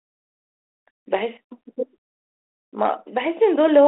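No technical faults detected.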